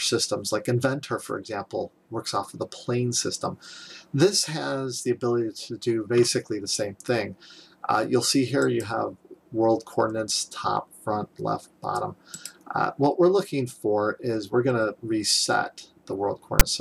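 A loud, hard-edged rasp of static, pushed off to one side, flashes up at 16.6 s and stops as abruptly as it starts. This is file tags played as audio: a block of text metadata was decoded as if it were sample data.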